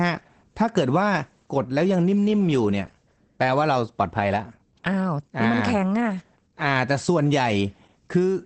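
Throughout, Opus voice compression in SILK mode leaves the speech muffled and hoarse, pointing to about 12 kbps; the spectrogram shows nothing above 8.4 kHz.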